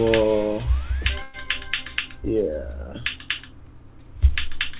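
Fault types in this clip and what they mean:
Burst of packet loss: at 1.22 s the last sound is held as a fading buzz or hiss for 114 ms, then jumps 120 ms ahead, concealing lost packets.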